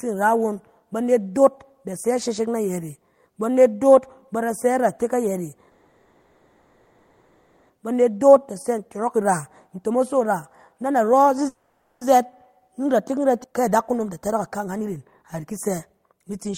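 At 5.71 s the speech stops moving and the last sound is drawn out as a fading buzz until 7.72 s. This is a call audio freeze, likely from packets held up so the jitter buffer ran dry. About 2 s of filler is inserted, and speech then resumes where it stopped.

From 7.82 to 9.25 s comes a jitter buffer speed-up. The receiver trims pitch periods to shed the built-up delay, about a tenth of a second here. Speech runs 108% fast at unchanged pitch. From 9.68 to 11.45 s it runs 123% fast, losing about 0.4 s, and sounds hurried.

A second freeze spans 11.48 to 12.04 s. About 0.53 s is filled, ending in roughly 0.31 s of silence.

A third speed-up runs from 12.14 to 16.54 s at 115%, removing about 0.7 s. Inside it, at 13.43 to 13.47 s, the audio skips ahead. About half a second is dropped, and the two sides are joined almost directly.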